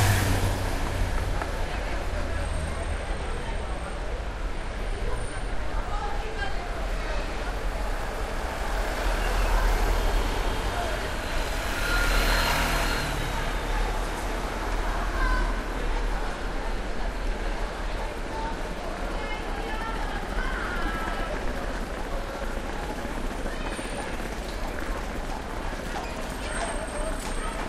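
No technical faults can be heard anywhere in this recording of sounds; the signal stays intact for its whole duration.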